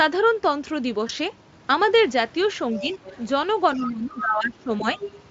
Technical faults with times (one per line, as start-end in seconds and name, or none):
1.07-1.11 VoIP packet loss concealed by the speech codec
2.76-3.19 other side's voice leaking through
2.79-2.92 speech suppressed in double talk
3.76-5.00 speech suppressed in double talk
3.83-3.92 other side's voice leaking through
4.17-4.23 other side's voice leaking through
4.95-5.12 other side's voice leaking through